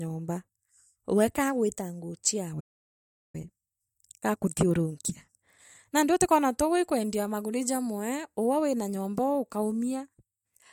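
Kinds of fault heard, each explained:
Playback stall: Right after "wee kaagwitaonguo" the speech cuts out at 2.60 s and stays silent for about 0.74 s, until 3.35 s. The player likely ran short of data or was blocked. The sound then resumes where it left off.
Time-compressed catch-up: From 3.35 s to 6.29 s the speech runs about 1.25 times fast at its normal pitch. The player drops small pieces and cross-fades the joins to clear the backlog. The hurried stretch ends before "twauga ii kwendiaa maguri".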